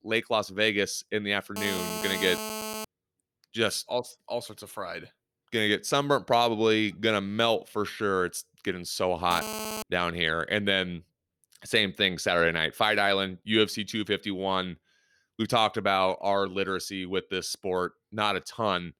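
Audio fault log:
1.56–2.85 s and 9.31–9.83 s, GSM phone buzz: a hard, raspy buzz at about 217 Hz, rich in harmonics, sits about 7 dB below the speech and bears no relation to it. A nearby 2G handset transmits in bursts at that rate, and the audio circuitry rectifies the radio pulses into audible tones. The first stretch is steady, as from an active call. The shorter second one fits intermittent data-transfer bursts.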